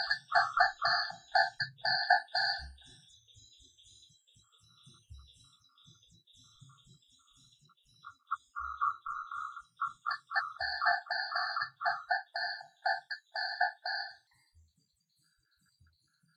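A section at the wrong speed runs from 14.27 s to the end: the audio plays 1.2 times too fast, with pitch rising about three semitones at the same instant, so everything turns brighter and hurried. The likely cause is an editor or player applying the wrong clock rate.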